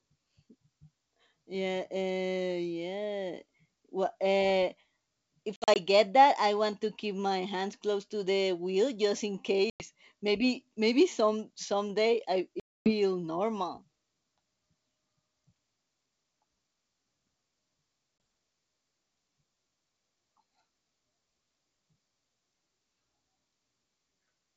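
Packet loss on an ADPCM call punches hard-edged silent holes at 5.56–5.77 s, before "get that I want", in scattered gaps; at 9.70–9.86 s, after "the wheel just in"; at 12.60–12.92 s, after "maybe some someday I"; and at 18.18–18.20 s. The decoder's predictor and step size lose track of the sender. Each return comes back slightly distorted before settling.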